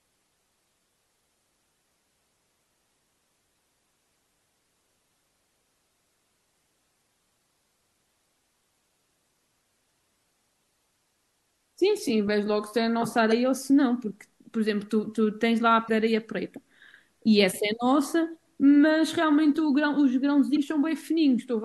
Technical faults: damaged data in a compressed stream

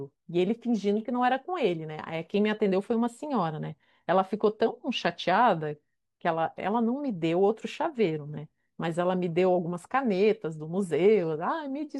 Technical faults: none

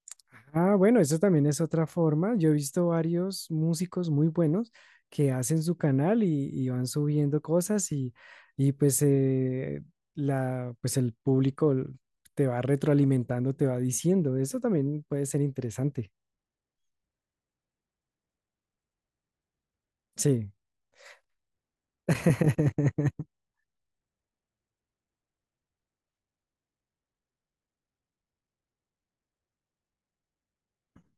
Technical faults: none

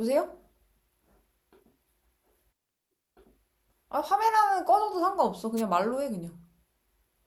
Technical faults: wireless microphone noise hit

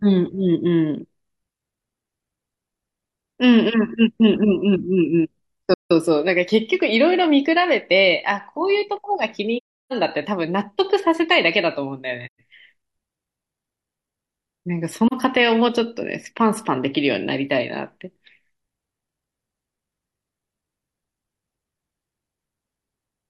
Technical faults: AAC frame loss with muting

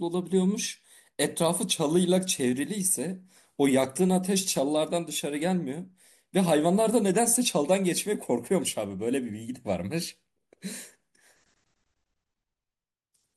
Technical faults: none

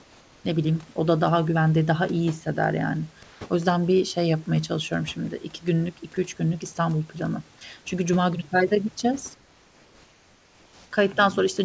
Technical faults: comfort noise in place of the background; speech cut by the noise suppressor

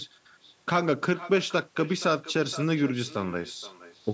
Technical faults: echo with no canceller

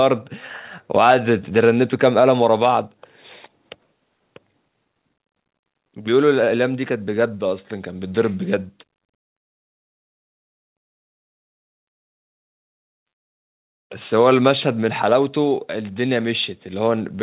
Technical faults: none

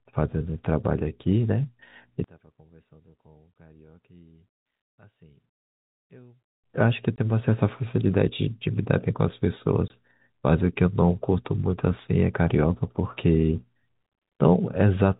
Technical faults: one channel inverted; packet loss filled with silence

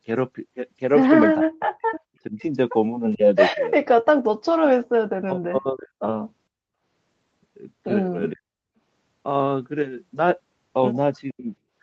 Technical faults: speech suppressed in double talk; echo leak; background gated by the echo canceller

